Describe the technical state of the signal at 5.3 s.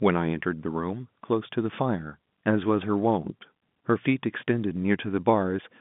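At 5.3 s the signal is intact, with only the narrow telephone band of G.711 coding, nothing above roughly 3.8 kHz, to be heard.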